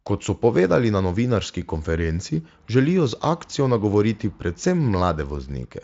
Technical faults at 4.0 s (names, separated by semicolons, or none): none